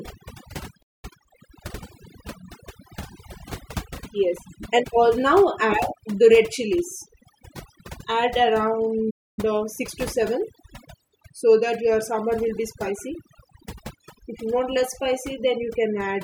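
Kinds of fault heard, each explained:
overdone noise removal: Throughout the speech, the background drops and breaks up into twinkling specks. A noise reduction stage set too aggressively is pulling individual frequency bands down whenever they approach its noise estimate, taking quiet parts of the voice with them.
playback stall: The sound cuts out mid-flow twice, for about 0.21 s from 0.82 s and about 0.27 s from 9.10 s, then resumes. The likely cause is the player running out of data or its thread being blocked, leaving the output silent until it recovered.
time-compressed catch-up: Right after each gap the speech hurries at its normal pitch, running 1.25 times fast from 1.05 to 1.89 s and 1.5 times fast from 9.39 to 9.93 s, as the player trims its backlog by cutting and cross-fading small pieces.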